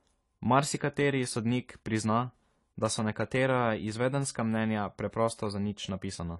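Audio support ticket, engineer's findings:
Dull, smeared speech throughout, nothing above 11.5 kHz. Warbling, fizzy sibilants. Likely AAC compression, consistent with about 32 kbps: coarse spectral quantisation, lowered cut-off.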